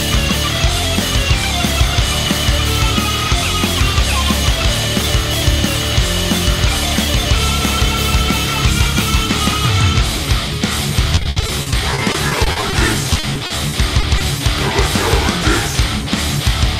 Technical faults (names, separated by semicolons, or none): repeated packet loss (robotic sound)